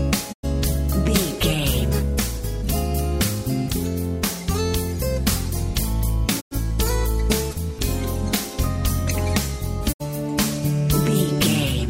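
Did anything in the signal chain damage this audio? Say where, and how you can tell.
Yes. Three times the sound fades out over about 20 ms into silence, at 0.32 to 0.45 s, 6.40 to 6.53 s and 9.92 to 10.02 s, then resumes further on. That is digital broadcast dropout at reception: the receiver muted over corrupt frames, gaps fitting two or three lost frames.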